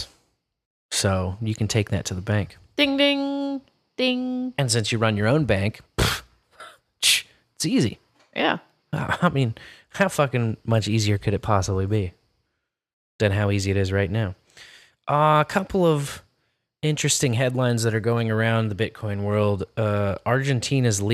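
Nothing goes wrong anywhere in this bit of speech; there's no technical fault to point to at any moment.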